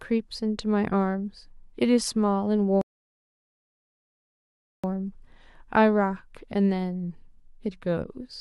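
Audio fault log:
2.81–4.84 s, rebuffering stall: the player exhausted its downloaded audio and halted playback until more data arrived, so the speech drops abruptly into about 2.02 s of silence, then picks up exactly where it stopped, with nothing missing but time added.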